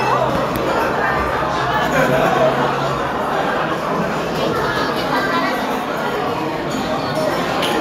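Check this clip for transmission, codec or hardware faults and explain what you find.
Nothing in this clip shows any fault to explain.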